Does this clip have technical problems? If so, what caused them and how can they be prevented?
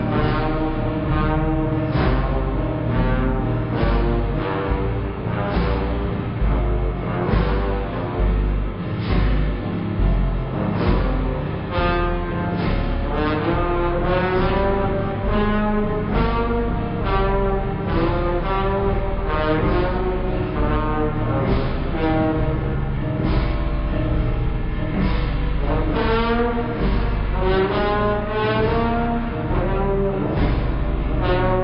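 Yes. Wrong sample rate throughout: everything runs at one third speed and about 19 semitones lower. That fits 48 kHz audio played at 16 kHz. Unlike time-stretching, pitch and tempo drop together. To prevent it, resample or tag the correct rate before playback.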